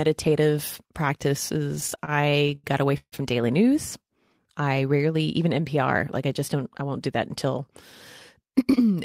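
A speech clip with two network playout faults. From 1.75 to 3.14 s, packets kept arriving late, so the jitter buffer ran dry 15 times and the receiver stretched the last sound to fill about 373 ms, with the longest gap 144 ms. The result is repeated stalls (stutter): nothing is lost, but roughly a quarter of that stretch is filler, so the speech drags and stammers. From 6.55 to 7.69 s, the jitter buffer held more audio than its target, and the receiver trimmed short pitch-period slices to catch up, about a tenth of a second in total. This jitter buffer speed-up makes the speech run at 107% speed with its pitch unchanged, so it sounds hurried.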